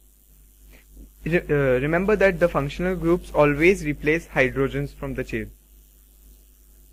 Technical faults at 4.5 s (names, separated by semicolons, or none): none